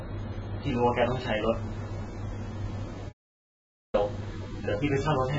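From the start, the speech is dull and smeared, with nothing above 7.6 kHz and a warbling, fizzy texture on sibilants and held sounds. This is heavy AAC compression, likely from AAC-LC at a low bitrate near 23 kbps. Unlike a simple low-pass filter, it makes the remaining bands churn and swirl.

At 3.09 s the sound cuts abruptly to complete silence and returns mid-flow at 3.94 s, after about 0.85 s. This is an audio dropout to silence, likely from the input being lost while zeros were written. Unlike a noise gate or fade, it leaves no room tone or decay in the gap.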